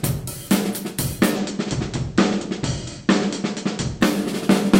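Digital radio blending to analogue affects this everyday sound recording from 1.23 to 4.20 s: the receiver cross-fades over about 204 ms to the station's FM broadcast and back, bringing hiss around 35 dB down, with no level change.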